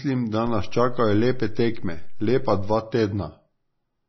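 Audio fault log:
Throughout: MP3 compression, likely at a low bitrate around 24 kbps. Nothing is present above 5.9 kHz, where the encoder cut the treble to save bits. Weak frequency lines drop in and out between frames, giving heavy watery, swirly smearing and chirpy sibilants across the speech.
0.47 to 2.74 s: DC step. The waveform's zero line jumps at 0.47 s and the offset lasts until 2.74 s. Each jump is heard as a low thump or click, while the speech itself carries on unchanged between them.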